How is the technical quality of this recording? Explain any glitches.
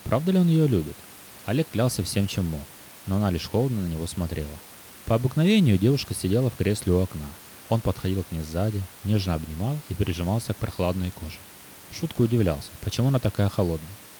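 No glitches to report; the only thing audible beneath the speech is room noise about 21 dB down, which belongs to the recording space, not the system.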